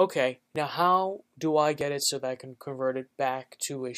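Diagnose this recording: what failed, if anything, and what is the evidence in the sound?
Two skips land at 0.56 s and 1.81 s. At each one the sound jumps forward with no gap of silence. Each skip is short, roughly 10 ms of material missing. The likely cause is a dropped buffer (overrun) at the driver or buffer stage. Recording software failed to read a block of samples before the hardware overwrote it. The lost block was simply skipped, and the audio on either side was joined edge to edge.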